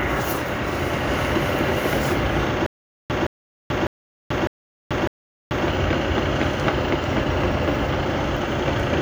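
The playback stream likely stalled between 2.66 and 5.68 s, and on each retry it replayed its last buffered fragment before running dry again. The result is a stutter with silent gaps: a 168 ms burst of the same sound repeats five times at an even 603 ms period, each followed by about 435 ms of digital silence. Whatever audio belonged in that span is missing rather than delayed.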